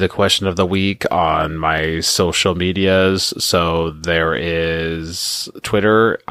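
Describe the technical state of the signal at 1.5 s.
At 1.5 s the speech signal is intact, with no technical fault present at that moment.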